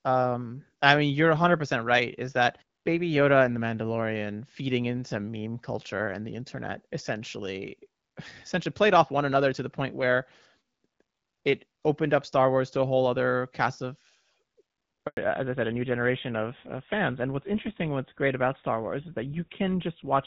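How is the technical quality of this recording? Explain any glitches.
The recording has two linked faults near the 15-second mark. Before that, the speech carries the open top end of HD Voice, with only light coding damage, which fits AMR-WB at around 12.65 kbit/s.

Handover gap, 15.07 to 15.17 s: the call was passed from one network to another, and no speech frames reached the receiver while the link switched. The sound dies away almost at once and stays silent for 100 ms until the new connection begins carrying audio. Whatever was spoken in that tenth of a second is gone.

Fallback to narrowband, from 15.17 s to the end: after the handover the call no longer runs as HD Voice but on an older narrowband codec, which points to GSM full rate at 13 kbit/s. Nothing above 4 kHz survives from this point, so the brightness and crisp consonant edges of the earlier section disappear. For the rest of the clip the speech sounds duller, boxier and rougher than before.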